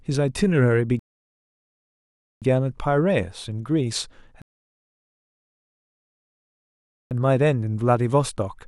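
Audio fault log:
0.99–2.42 s and 4.42–7.11 s: rebuffering stall. The speech drops to silence for 1.42 s, then 2.69 s, and picks up exactly where it stopped with nothing missing. The player ran out of downloaded audio and waited for more, so the pauses add time without losing any sound.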